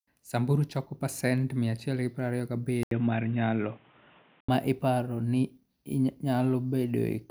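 Speech, and at 2.83 s there's a brief gap of about 80 ms, after which the sound turns dull and boxy, with nothing above about 3.8 kHz and a new background noise sitting roughly 35 dB under the voice. The level doesn't really jump. At 4.49 s the full bandwidth comes back. That's most likely the input switched to a poorer device, such as a headset's call profile, and then switched back.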